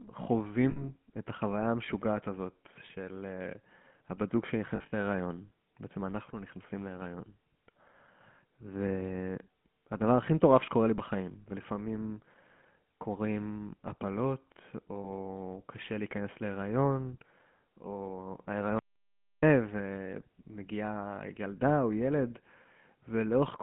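Throughout the speech, the GSM full-rate codec leaves a buzzy, gravelly roughness, consistent with the 13 kbps GSM full-rate coder. It rebuilds the voice from a vocal-tract model driven by sparse, regularly spaced pulses, discarding much of the fine excitation detail. The line band is 150 Hz to 3.4 kHz, so a spectrogram shows nothing above 3.4 kHz and harmonics smeared into a coarse, grainy texture. The waveform looks blocky and pulse-driven rather than smooth.

At 0.70 s, lost GSM frames cut in for 60 ms, consistent with three missing 20 ms frames. The decoder repeats the last good frame's settings, so the sound hangs as a brief metallic ring. A spectrogram shows frozen horizontal bands instead of changing formants, and the waveform shows a repeating envelope. From 4.76 to 4.93 s, 120 ms of frames are lost, scattered over about 160 ms, with the longest run around 70 ms. It sounds like a stuttering, rough ringing, seen as several short frozen patches. 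At 15.00 s, another 40 ms loss gives a short metallic blip.

From 18.79 to 19.43 s, an audio dropout to silence removes 640 ms. The sound cuts off mid-flow and returns abruptly, with no room tone in the gap, most likely because the input signal was lost while silence continued to be written. The waveform is a flat line and the spectrogram a blank column.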